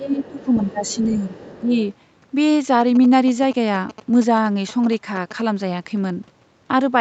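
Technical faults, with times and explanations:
0.00–1.28 s and 1.60–1.72 s, speech suppressed in double talk: the talker's level dips by about 10 dB in patches, likely an echo canceller turning everything down while both sides spoke.
0.24–0.45 s, 0.86–0.99 s and 1.31–1.81 s, other side's voice leaking through: faint scraps of a second voice, roughly 25 dB under the talker, likely loudspeaker echo the canceller failed to remove.
2.81–5.41 s, GSM signalling bursts: a galloping ticking buzz at 217 Hz, about 15 dB below the speech, from a nearby 2G phone signalling while the audio circuitry rectified its radio bursts.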